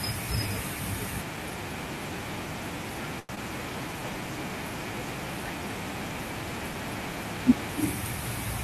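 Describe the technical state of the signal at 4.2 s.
A jitter buffer slow-down runs from 3.81 to 4.22 s, so 4.2 s falls at its tail end. Running short of reserve, the receiver repeated single pitch periods to stretch the audio by 50 ms, so the speech plays at about 89% speed with unchanged pitch and sounds drawn out.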